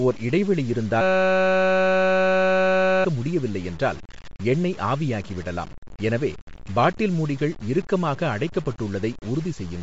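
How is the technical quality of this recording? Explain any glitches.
The recording has poor technical quality. The speech is grainy and band-limited throughout, and a buzz replaces about two seconds of it.

Throughout, there is grainy distortion that rises and falls with the speech. The error is only about 20 dB below the signal. Quiet tails turn rough. This is likely low bit depth without dither, with the samples truncated to around 6 bits.

Also throughout, nothing is heard above 7.7 kHz. The upper band is breathy and grainy, with plainly audible codec damage. The likely cause is Bluetooth LC3 compression at a low rate, which fits about 32 kbps. The codec cut and noise-filled the top of the spectrum.

From 1.01 to 3.05 s, right after "ஓர் இடைவெளி", the speech stops. A steady 188 Hz buzz takes its place. Speech returns with "முடியவில்லை என்றால் எண்ணெய் ஆவியாகிவிடலாம்". This is a system hang loop. 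The playback froze while the hardware kept replaying one 5.33 ms piece, which fits a 256-sample buffer. About two seconds of audio are lost.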